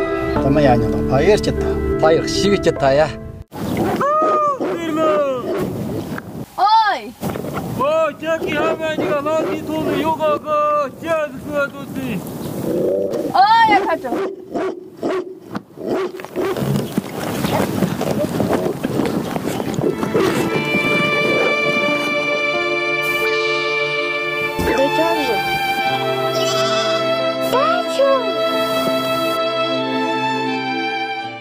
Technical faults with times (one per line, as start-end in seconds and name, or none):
10.96 chunks out of order